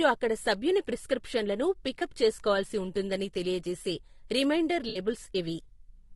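Low-delay AAC compression runs through the whole speech clip: the voice sounds rough and grainy, with noise filling the gaps between harmonics and a thin, synthetic top band, likely from AAC-ELD's short frames at a low rate, which fits about 32 kbps. AAC frame loss with concealment occurs from 1.99 to 2.02 s, a 20 ms smeared, noisy patch that fits one lost frame rebuilt from the preceding spectrum, and again from 4.89 to 4.99 s, where roughly 60 ms of guessed spectrum sounds phasey and blurred.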